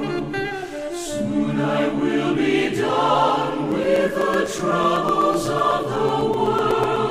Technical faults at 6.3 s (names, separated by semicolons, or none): periodic USB or driver dropouts